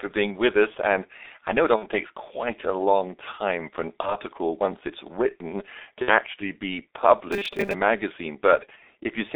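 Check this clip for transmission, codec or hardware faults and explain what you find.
The whole clip has a narrow, damaged telephone sound, with three short concealment dropouts and one robotic stretch near the end.

G.723.1 codec, throughout: the speech sounds muffled and hoarse, with smeared consonants and nothing outside roughly 0.3 to 3.7 kHz. This fits a heavily compressed G.723.1 stream at about 6 kbit/s, whose 30 ms frames and slow-updating voice model blur fast detail.

VoIP packet loss concealed by the speech codec, at 1.76 to 1.86 s, 4.01 to 4.16 s and 6.02 to 6.12 s: each spot turns briefly into a fading buzzy or noisy smear. The decoder filled gaps of one or two 30 ms frames by extending its last pitch and filter at falling gain.

Robotic sound from repeated short buffers, 7.32 to 7.74 s: the speech becomes a rigid metallic buzz near 200 Hz that still loosely tracks the syllables. 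The likely cause is audio arriving too seldom, so a 5 ms stretch is replayed and about half the real audio is skipped.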